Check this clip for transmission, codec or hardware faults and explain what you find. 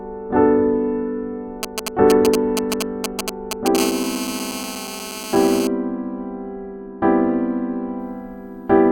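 Two hardware faults are audible in this music clip. Both come from a nearby 2G handset whose radio pulses the audio circuit picks up and rectifies.

GSM signalling bursts run from 1.63 to 3.77 s. A phone is exchanging short control bursts with the network at about 217 Hz. They are demodulated into a galloping dit-dit-dit of ticks and brief buzzes. These sit at roughly the same level as the music.

GSM phone buzz follows from 3.78 to 5.67 s. The phone has moved into a call and now transmits continuously at 217 bursts per second. The rectified pulses give a hard, raspy, harmonic-rich buzz. It is unrelated to the music and about 9 dB below it.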